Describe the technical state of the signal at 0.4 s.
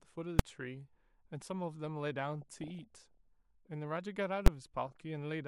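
At 0.39 s the speech is hit by invalid numbers at full scale. A calculation in the processing chain produced infinite or invalid values. These were clamped to the largest value the signal can hold. The output is pinned at full scale for about 2.9 ms, which fits a 128-sample block. The block is so short that its start and end merge. The result is heard as a single very loud bang.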